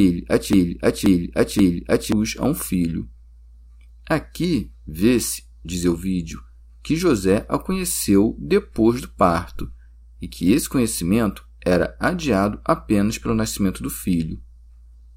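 A speech clip that opens with a broken-record loop already under way: from 0.0 to 2.12 s a 0.53 s fragment repeats exactly, back to back, three times. The audio due in that span is lost, likely because the player or stream stalled and kept resending its last buffer.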